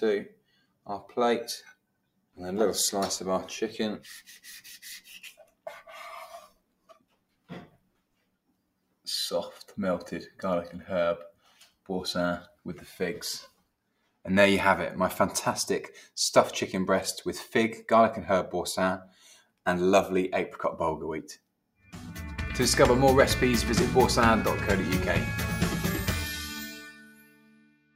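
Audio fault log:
Throughout: noise suppressor applied to music or sounds. A suppressor tuned for speech is treating steady, sustained parts of this sound as background noise, so its level keeps swinging by roughly 5 dB as the gain reacts. Onsets survive while held portions and decays get pulled down, giving a pumping, thinned character. On a waveform the envelope breathes unevenly; a spectrogram shows sustained bands fading and recovering rather than holding steady.
0.29–2.38 s, 5.38–9.06 s, 11.32–14.25 s, 19.08–19.66 s, 21.37–21.95 s, 26.71–27.95 s: sound cut by the noise suppressor. In each span the suppressor clamps down hard, cutting by about 18 dB (about 19 dB in the last one). The drop affects anywhere from a few hundred milliseconds to around two seconds within each span, and tails and steady passages vanish early while sharp attacks still poke through. A waveform shows abrupt hollows after transients, and a spectrogram shows sustained energy dropping into dark gaps.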